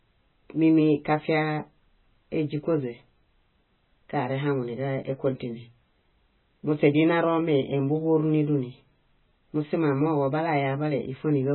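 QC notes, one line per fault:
Throughout: MP3 compression, likely at a very low bitrate, something like 16 kbps. Nothing above about 4.1 kHz, so the speech sounds dull. Weak frequency lines flicker frame to frame, giving a heavy watery swirl, metallic chirps on s sounds, and smeared attacks.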